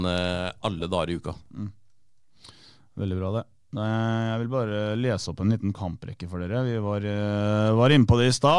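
A short speech recording with nothing technically wrong to point to anywhere in it.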